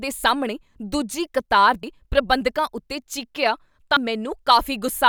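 At 1.83 s, between "ਸਾਹਮਣੇ ਦੂਜੀ ਕਤਾਰ" and "ਪ੍ਰਬੰਧਕਾਂ ਉੱਤੇ ਚੀਕੀਆ", and again at 3.97 s right after "ਪ੍ਰਬੰਧਕਾਂ ਉੱਤੇ ਚੀਕੀਆ", compressed frames are skipped. The speech lurches forward by about a tenth of a second, which fits one 85.3 ms frame going missing.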